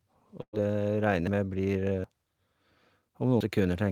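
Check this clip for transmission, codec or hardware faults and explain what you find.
Four faults are audible in this speech: one burst of packet loss near the start and three dropped buffers later on.

From 0.41 to 0.55 s there is a burst of packet loss. The sound just before the gap is stretched into a held, fading continuation lasting about 114 ms, and part of that stretch dies away into roughly 70 ms of silence. The speech then picks up further along, with about 120 ms of it simply missing. The receiver had no packets for that span, so it extended the last good sound and turned it down while waiting, rather than playing anything new.

At 1.27, 2.04 and 3.41 s the speech lurches forward with no pause at all, losing about a tenth of a second at 1.27 and 3.41 s and closer to 150 ms at 2.04 s. Each is likely a dropped buffer (overrun): the recording program fell behind, the hardware overwrote samples before they were collected, and the audio on either side of the lost piece was butted together directly.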